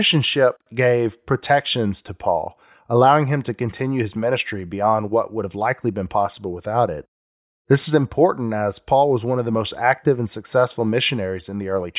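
No technical faults can be heard anywhere in the recording.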